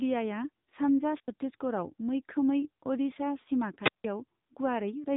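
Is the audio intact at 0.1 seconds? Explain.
No. The AMR narrowband mobile codec runs throughout. Its sparse vocal-tract model, with plainly audible buzzy, synthetic damage fitting a low bitrate near 8 kbps, leaves a spectrogram empty above 3.8 kHz.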